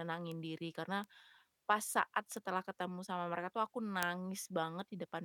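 Speech, marked by four bit error spikes. Each is a single sample, heard as one sharp tick at 0.32 s, 1.04 s, 2.37 s and 4.03 s. The first three reach about -28 dBFS. The last is louder, at about -10 dBFS. A single flipped bit in memory or on a digital link makes one sample jump by a power of two and snap back. The ticks spread across the spectrum and bear no relation to the speech around them.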